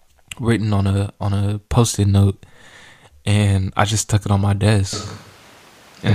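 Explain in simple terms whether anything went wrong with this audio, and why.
The recording likely lost its close microphone and fell back on one further away, a switch to a distant microphone. At 4.93 s, right after "stuck it on my", the speech suddenly turns roomy and hollow with less bass, background noise comes up, and it stays that way to the end.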